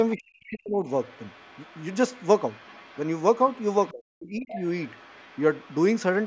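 From 0.15 to 0.79 s, the speech dips hard, by about 40 dB at its deepest. This is speech suppressed in double talk. Both sides likely talked at once, and the echo canceller turned the talker down along with the echo. At 0.46 s a faint scrap of the other side's voice leaks through. From 0.88 to 3.93 s it returns as a quiet voice under the speech, likely echo the canceller missed. From 3.91 to 4.56 s the speech drops out again in the same way. At 4.47 to 4.60 s the leaked voice is louder, only somewhat below the talker. It lingers faintly from 4.84 to 5.80 s and briefly at 6.21 s.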